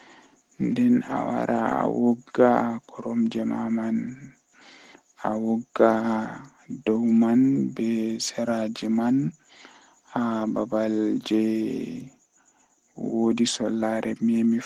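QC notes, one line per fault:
No faults heard anywhere in this speech recording.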